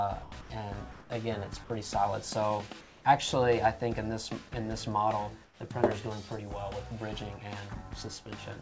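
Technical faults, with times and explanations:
0.23–0.32 s, 0.41–0.50 s and 1.64–1.70 s: sound dropped by the voice detector. Short stretches of 60 to 90 ms give way to steady noise or near silence, likely because the detector mistook real sound for background and stopped sending.
0.92–1.10 s, 2.81–3.05 s and 5.45–5.60 s: comfort noise in place of the background. The background, about 25 dB below the loud parts, turns smooth and featureless, likely synthetic fill during a transmission pause. It comes out about 2 dB louder, then about 2 dB and 6 dB quieter, respectively.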